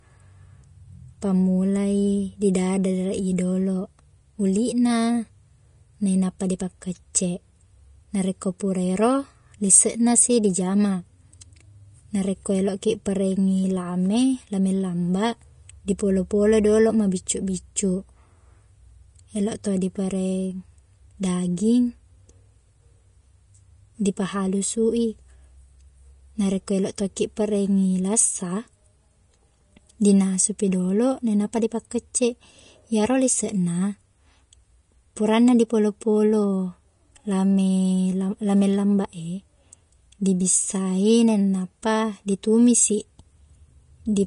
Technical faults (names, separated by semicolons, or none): Vorbis compression